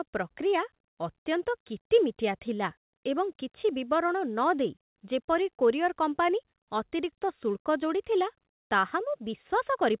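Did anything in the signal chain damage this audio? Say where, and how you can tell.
No, nothing in this speech stood out on listening as damage from the signal chain, and the lack of content above 4 kHz fits the G.711 mu-law call path it travelled through.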